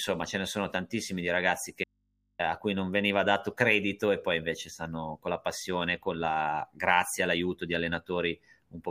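From 1.84 to 2.39 s, just after "sono tantissimi di ragazzi", the speech abruptly vanishes for about 0.55 s, leaving only low hum roughly 45 dB under the voice until "a cui non veniva" cuts back in. This audio dropout to a faint residue likely came from a brief break in the signal feed while the downstream input stayed open.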